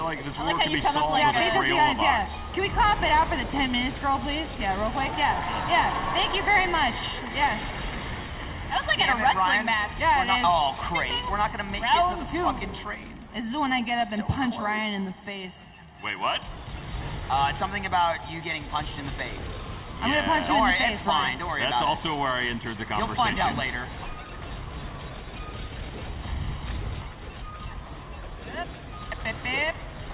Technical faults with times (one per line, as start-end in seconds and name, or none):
none